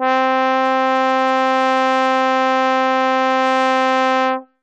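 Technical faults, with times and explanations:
No technical faults detected in the music.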